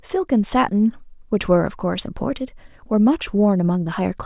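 No technical faults can be heard anywhere in the speech.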